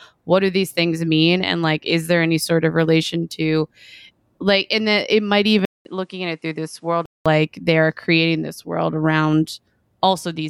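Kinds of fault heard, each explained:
Input switched to a poorer device: after a 200 ms gap at 5.65 s, speech turns quieter and duller, cut above 11.4 kHz, likely another microphone, until 7.26 s.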